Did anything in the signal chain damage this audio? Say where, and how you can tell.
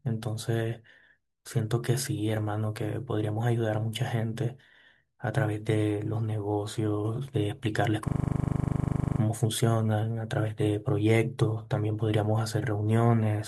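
Yes. From 8.08 to 9.2 s the speech stops moving and one 40 ms fragment repeats exactly, 28 times, giving a rough buzzing stutter at about 25 Hz before normal playback resumes with nothing apparently skipped. This is a system hang loop at the driver or buffer stage: the host stalled and stopped supplying fresh samples, so the audio hardware kept replaying the same 40 ms ring buffer until the system recovered.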